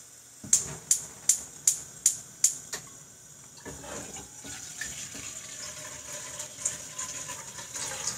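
An everyday sound recording with gain pumping throughout. The gain swings by around 10 dB. Loud and quiet parts sit close in level and sound squashed. The likely cause is excessive input gain with a fast limiter pulling it down.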